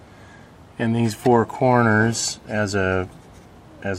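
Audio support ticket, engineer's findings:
No audible faults found on review. No action required.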